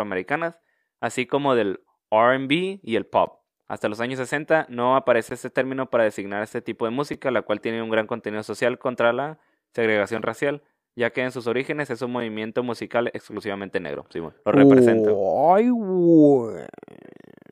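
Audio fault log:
3.26, 5.29, 7.13 and 12.20 s: block of digital silence. Four short holes of 11.6, 17.4, 5.8 and 5.8 ms where the audio cuts out and back with no fade, so the three shortest are heard as ticks rather than silence. The 11.6 and 5.8 ms lengths fit missed 512- and 256-sample buffers.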